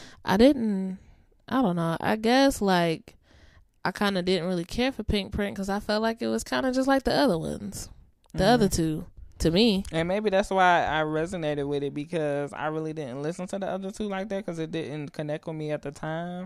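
No technical faults can be heard anywhere in the recording.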